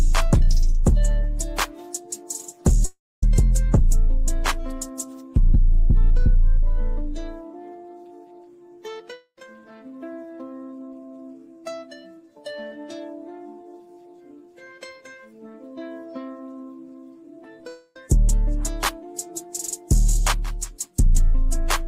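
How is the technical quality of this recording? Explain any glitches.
The recording has three audible breaks. At 2.85 to 3.23 s, 9.14 to 9.38 s and 17.68 to 17.96 s the sound turns into a fading buzz. It drops to silence for about 250 ms in the first break and 80 ms in the second, with none in the third, then resumes with that stretch gone. This is likely a long network dropout, where the receiver stretches the last sound over the missing audio.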